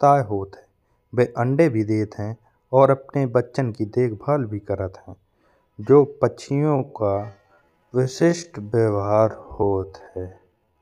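From 6.44 s to the end at 10.82 s there's a time-stretched section: the pace suddenly drops to about 0.6 times normal while pitch holds steady, so it drags. Likely software stretching it to fill a length by repeating short slices.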